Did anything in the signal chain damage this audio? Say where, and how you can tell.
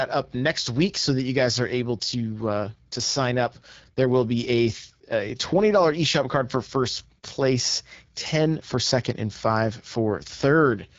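Yes, the codec stage: throughout, the speech sounds rough and raspy with nothing above 7.6 kHz, which points to the AMR wideband (HD Voice) codec at one of its lowest rates, around 8.85 kbit/s.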